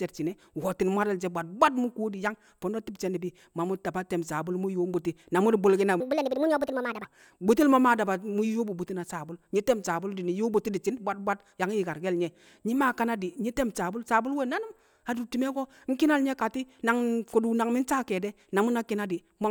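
From 6.00 to 7.05 s, a section at the wrong speed: the speech runs about 1.49 times too fast, so it sounds hurried and roughly seven semitones higher. This is likely playback against the wrong clock. Unlike a pure pitch shift, timing and pitch jump together.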